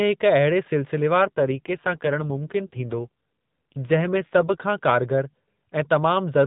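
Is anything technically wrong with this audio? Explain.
Yes. From 1.22 s to 4.64 s the speech goes through an AMR rate drop, falling from 12.2 to 5.9 kbps. The network moves the AMR-NB codec to a lower mode and spends the freed bits on error protection. The band stays at 4 kHz with no gap, but the speech turns rougher and more synthetic until the higher rate returns.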